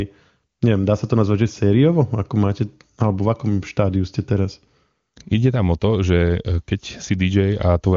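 Nothing goes wrong anywhere in this speech recording, and the AMR wideband (HD Voice) coding shows little if any trace, which fits its top rate of about 24 kbit/s.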